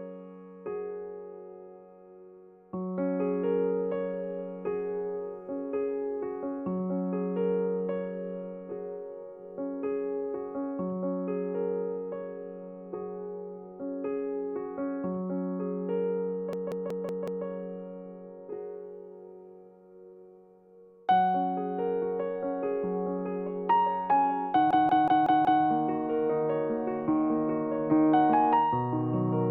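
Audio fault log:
16.53 to 17.46 s and 24.71 to 25.64 s, system hang loop: twice the playback side froze while the sound hardware kept cycling one ring buffer, replaying the same 185.76 ms slice five times before recovering, which fits an 8192-sample buffer. At 5.38 repeats per second the loop is too slow to fuse into a buzz, so each episode comes across as a rapid machine-gun stutter of identical fragments. Almost no audio seems to go missing around them.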